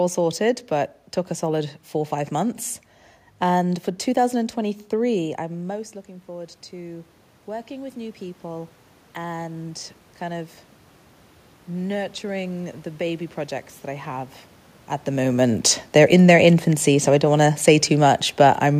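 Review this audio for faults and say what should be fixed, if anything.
Automatic gain rising runs from 5.36 s to 10.58 s. Just before it, around 5 s, the talker moves away and the level at the microphone drops by about 15 dB. The gain control treats that as a quiet input and ramps its gain up by about 8 dB over roughly five seconds, so the voice and the room noise swell together rather than the voice alone recovering. The second movement near 14.5 s comes from the talker, not the system. To prevent this, give the gain control a slower release or a hold period so brief changes in talker distance do not drive it.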